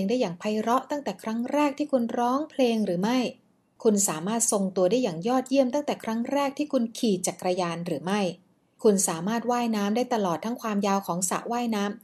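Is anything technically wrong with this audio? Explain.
No, nothing technically wrong stands out here; this speech recording sounds perfectly fine all the way through.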